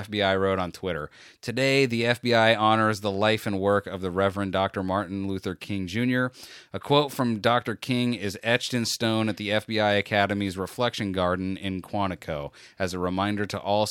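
No technical faults are audible anywhere in the recording.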